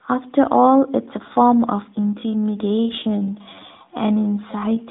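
From 1.91 s to the end, software likely stretched the speech to 0.69 times its pace: a time-stretched section, dragging at unchanged pitch.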